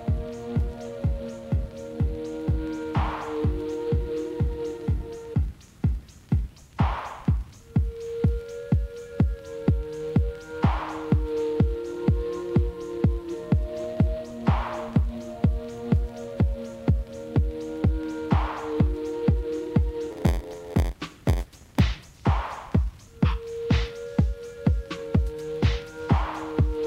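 At 10.94 s a brief error peaking around -29 dBFS comes from a corrupt FLAC frame: flipped bits, passed by an unchecked checksum, derail the decoder's prediction from the damaged bit on.

From 20.10 to 21.81 s an 86.1 Hz buzz appears and the sound drags to 0.938 times speed at about normal pitch. This is a block size mismatch (padded): each short block is topped up with zeros, which fits a 512-sample read size.

At 24.15 s a fainter error, about -40 dBFS, comes from three more corrupt frames, clean again at the next intact frame.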